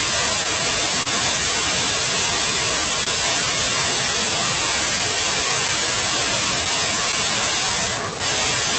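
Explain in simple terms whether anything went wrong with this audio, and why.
The speech went through an internet call with several timing faults.

Clock drift between sender and receiver: the sending device's clock ran slightly slow, by roughly one and a half percent. The receiver kept running short of audio and had to stretch or repeat tiny pieces, so small hiccups recur unevenly throughout the whole clip.

Short stall from a late packet: twice, a piece of audio arrived late, at 1.02 to 1.07 s and at 3.04 to 3.08 s. Each time the receiver held the last sound for about 30 ms until the piece arrived. Nothing is lost, but the sound briefly sticks with a slight buzz or dip.

Scattered short gaps: between 4.98 and 7.72 s, about five small pieces went missing or came late. The receiver patched each hole, the longest around 15 ms, by continuing the previous sound. The speech stays clear, with brief ticks or smears.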